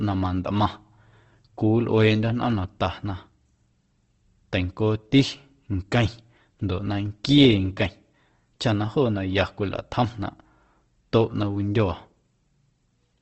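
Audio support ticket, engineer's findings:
Speech throughout, grainy and rough, with noisy fizz in place of clean detail. Nothing above 8.2 kHz, so a wideband ceiling. Likely Opus compression, starved of bits, around 16 kbps by the sound. Bands get filled with noise or folded copies, hence the grit rather than swirl.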